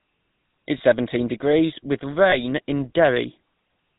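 The clip is speech carrying the GSM full-rate codec throughout, and the damage is plainly audible. There is a buzzy, gravelly roughness, and nothing comes through above 4 kHz. The codec models the vocal tract and drives it with sparse, regularly spaced pulses, and that is the source of the grit. The sound fits the 13 kbps full-rate coder.

There are two lost GSM frames. The first falls at 0.78 to 0.81 s, just before "seventeen degrees with". The second falls at 2.30 to 2.35 s, just after "seventeen degrees with". Each is a brief rough, metallic ring. The decoder repeats the last good frame. Each gap points to one missing 20 ms frame.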